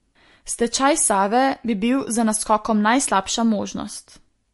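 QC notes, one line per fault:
Throughout, MP3 compression artefacts: the speech has a watery, swirly quality, and the top end stops dead at about 11.3 kHz, so sibilants sound dull and chirpy. The damage is plainly audible. This is likely a low-bitrate MP3 encode, consistent with something around 48 kbps. With that few bits, the encoder chops the treble at a fixed frequency and drops weak frequency lines that flicker in and out between frames. That flicker is what makes it swirl.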